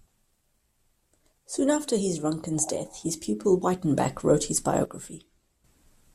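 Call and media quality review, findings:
Sudden gain jump, 4.85 s to 5.64 s, just after "wrote his". Speech and noise floor drop together by about 11 dB, then return. Likely a digital gain stage applying a new setting instantly, with no ramp between samples.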